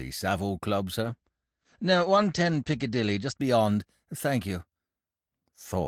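From 1.03 s to 4.33 s the speech goes through a call bitrate drop. The encoder was pushed to far fewer bits, which fits a fall from about 40 kbps to 11 kbps. The top end narrows from 20 kHz to 8 kHz, so the sound turns muffled and grainy, and the worst stretch lasts 1.74 s. Packet loss leaves brief gaps or smeared fill, but this degradation is continuous, and full clarity returns only as the rate recovers.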